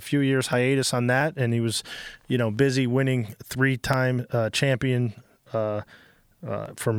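Just after "few years", from 0.53 s to 6.66 s, a click recurs every 0.68 s, about ten in all, heard only while speech is present. These are clock drift buffer slips. The likely cause is two devices whose clocks disagree by roughly 500 ppm, so a handful of samples, around fifteen, is dropped or repeated at each slip. Unlike packet-loss or dropout clicks, which land irregularly, these arrive at a fixed rhythm.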